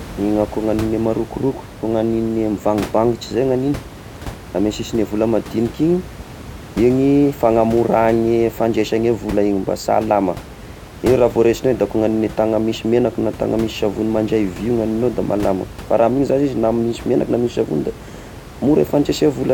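No technical faults can be heard anywhere in this speech recording. Some background noise from the room sits under the speech, about 16 dB below it, and that belongs to the recording space rather than to the system.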